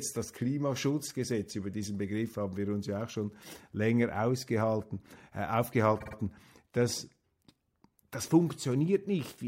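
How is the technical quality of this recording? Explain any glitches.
One glitch stands out in the speech: a short stutter caused by repeated frames.

From 6.00 to 6.15 s, just after "schon länger ausgehalten äh", a 52.2 ms block of compressed audio, which fits a two-frame run, plays three extra times. The decoder replays the same fragment, producing a rapid stutter and lengthening the recording by about 157 ms.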